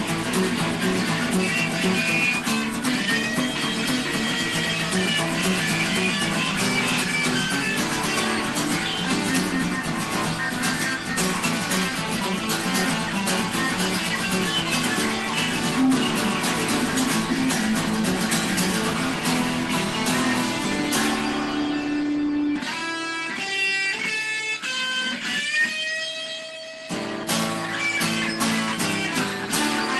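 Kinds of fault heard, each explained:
No faults found; the audio carries the expected signature of a WebRTC call path, with the top end stopping near 12 kHz, which fits Opus at roughly 20 kbps.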